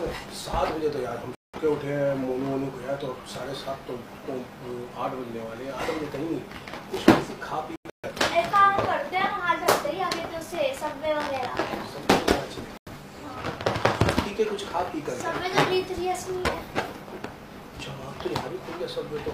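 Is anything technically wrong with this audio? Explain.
Yes. Three corrupt frame muted dropouts occur, at 1.35–1.59 s, 7.76–8.10 s and 12.77–12.92 s. The decoder rejected damaged compressed frames and the player substituted silence, so the sound stops abruptly for 0.14 to 0.34 s, spans fitting several frames, without shifting timing.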